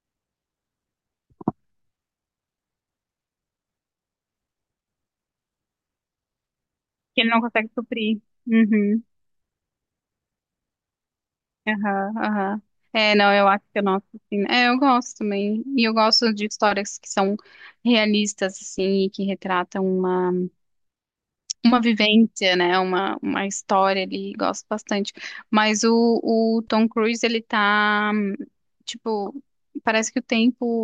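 No technical faults are audible anywhere in this recording.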